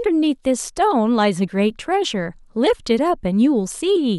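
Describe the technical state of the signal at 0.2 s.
At 0.2 s the speech signal is intact, with no audible dropout, distortion, clipping or other technical fault at that moment.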